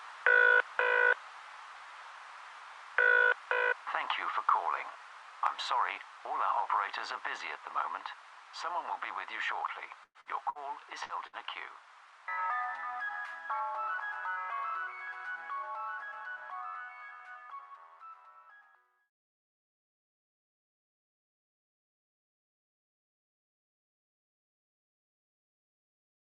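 Five bursts of packet loss start at 10.03, 10.21, 10.50, 11.03 and 11.27 s. The receiver stretched and faded the last sound, then jumped ahead about 60 ms (120 ms at 10.03, ending in silence). Unlike a clean dropout, each gap holds a decaying smear.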